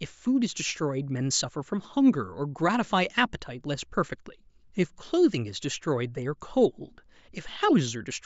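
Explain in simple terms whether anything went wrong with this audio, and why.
Listening to the speech, nothing stood out as having gone wrong with the audio.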